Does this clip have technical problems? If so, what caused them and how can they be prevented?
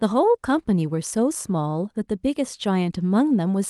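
No, there are no technical problems in this speech clip. It has passed through a WebRTC call path, and its top end stops at about 12 kHz, which fits an Opus codec running at around 40 kbps.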